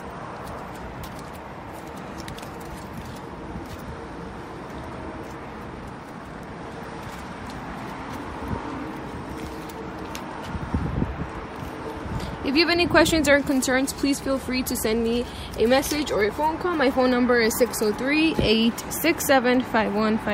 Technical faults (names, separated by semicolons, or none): skip ahead; jitter buffer speed-up